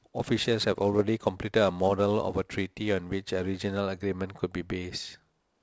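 From the start to 3.80 s, sample clock jitter: the converter's clock wanders by several microseconds, so each sample lands slightly off time. The speech gains a hiss-like roughness roughly 30 dB below it, strongest on loud, bright sounds. A spectrogram shows broadband noise following the speech energy and vanishing in pauses.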